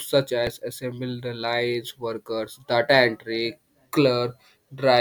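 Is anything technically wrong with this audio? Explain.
Yes. At 0.47 s there is a repeated buffer. New audio arrived late, so the device replayed its last block of about 1.45 ms, which fits a 64-sample buffer, twice more. The piece sounds three times with hard joins, giving a brief click or buzz. Essentially no audio is lost.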